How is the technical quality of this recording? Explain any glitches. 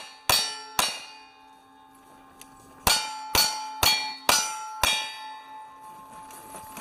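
One glitch stands out, a call bitrate drop from 3.21 s to 5.59 s. The call's bandwidth estimate fell, so the encoder had far fewer bits to work with and coded the audio more coarsely. The degradation fits a fall from around 64 kbps to about 22 kbps, held at its lowest for roughly 2.3 s. Through that stretch the sound turns rough and watery, then clears once the bitrate recovers at 5.59 s.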